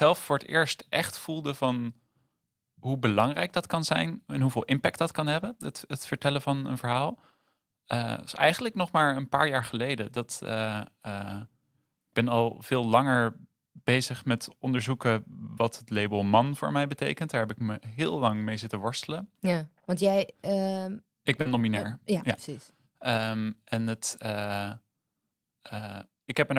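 At 5.37 to 5.47 s comes a lost packet rebuilt from error correction. About 60 ms of audio went missing, which fits three 20 ms packets. Each following packet carried a low-bitrate copy, and the decoder played those instead. There is no gap. The stretch turns rougher and noisier for a moment. A shorter one follows at 8.97 to 8.99 s. Only 20 ms was rebuilt, pointing to a single packet, and it sounds rougher and noisier.

At 21.41 to 21.47 s there is a short concealed packet loss. About 40 ms never arrived in time. The receiver extended the last sound to fill roughly 38 ms of it, then blended back. It comes across as a brief smear. Overlapping this, from 21.45 to 21.59 s, another 80 ms was rebuilt from error correction, fitting four packets. The roughness therefore carries on past the smear.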